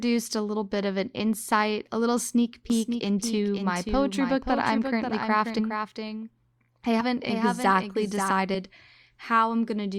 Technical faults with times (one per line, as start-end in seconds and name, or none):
2.70-8.31 doubled audio track
5.58-5.61 compressed frames skipped
7.00-7.03 compressed frames skipped
8.54 compressed frames skipped